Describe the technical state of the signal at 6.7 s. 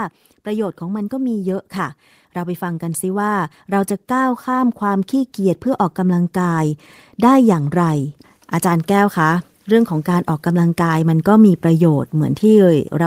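At 6.7 s the speech is at the very end of an automatic gain rise that began around 0.43 s and settles at 6.77 s. The gain control judged the input too quiet and kept raising its gain, about 11 dB in total, so voice and background noise swell together over several seconds. On a waveform the envelope widens steadily; on a spectrogram the whole band, noise floor included, brightens gradually rather than in steps.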